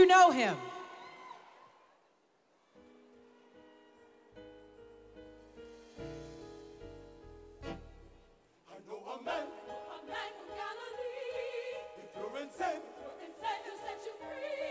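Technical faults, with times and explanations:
No technical faults can be heard in this audio.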